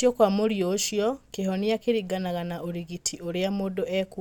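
No technical faults can be heard anywhere in the recording.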